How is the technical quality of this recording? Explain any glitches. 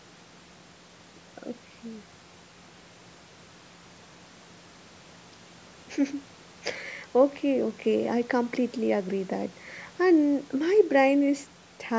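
No glitches can be heard anywhere in the recording; the speech has simply passed through a call's microphone processing, which trims away the lowest bass and leaves nothing above 8 kHz, both of which are normal for that path.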